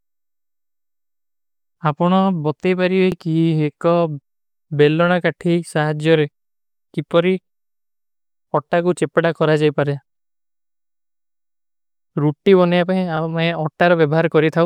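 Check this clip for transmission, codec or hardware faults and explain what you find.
There is one fault in the speech: overlapping chunks. At 3.12 to 3.14 s, and at 13.17 to 13.19 s just after "ରୂଟ୍ଟୀ ବନିଯା ପାହିଂ", a new 5 s chunk begins about 25 ms before the previous one ends. That 25 ms plays twice, giving a brief stutter-click at each join.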